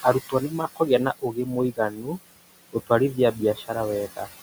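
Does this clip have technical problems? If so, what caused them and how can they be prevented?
Yes. Noise suppressor artifacts run throughout: the suppressor pulls the steady room noise, which sits about 15 dB below the speech, down by about 17 dB frame by frame, so it pumps between phrases. Using a gentler suppression depth or lowering the room noise at the source would prevent this.

Speech cut by the noise suppressor occurs at 0.29–0.81 s, 1.19–1.53 s, 1.72–2.13 s and 3.33–3.7 s. Soft speech energy was treated as noise and ducked by up to about 14, 21, 13 and 10 dB, so those parts sound swallowed. Placing the microphone closer, or setting a less aggressive suppressor threshold, would keep quiet speech above the noise estimate.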